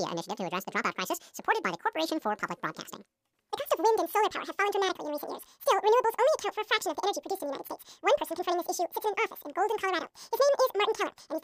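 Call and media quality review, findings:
Speech at double speed, a full octave up (12 semitones), for the whole clip. Audio read two samples at a time (double speed): the reader likely misreads the stream format as two channels or wider samples.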